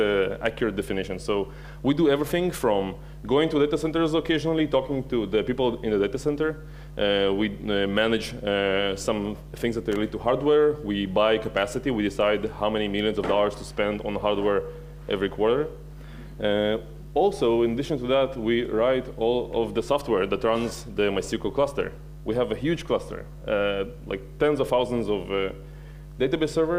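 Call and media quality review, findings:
Loose connector crackle around 9.92 s, lasting about 45 ms: a brief scratchy burst where a worn or dirty contact keeps making and breaking, chopping the signal. Check cable and jack.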